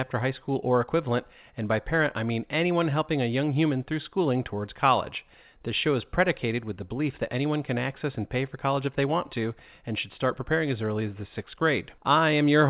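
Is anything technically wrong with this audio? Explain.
No, nothing is technically wrong with this speech audio.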